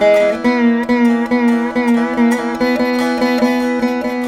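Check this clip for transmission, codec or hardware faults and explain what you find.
No transmission, codec or hardware faults turn up in this clip.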